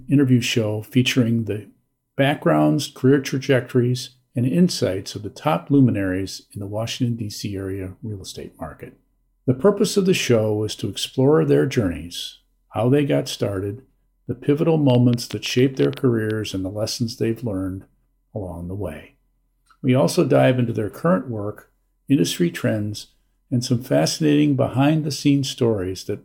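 From 14.9 to 16.31 s a train of clicks ticks over the sound: around fifteen same-shaped pops at an uneven 9.3 per second, peaking a little above the surrounding level, likely interference or a faulty connection, unlike random crackle, whose pops vary.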